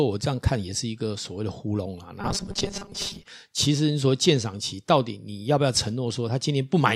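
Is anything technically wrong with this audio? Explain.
Yes. Robotic sound from repeated short buffers, 2.21 to 3.26 s: a fixed 200 Hz buzz sits over the speech, which fits a 5 ms buffer being looped, likely because new audio arrived too late and about half of it was filled with repeats.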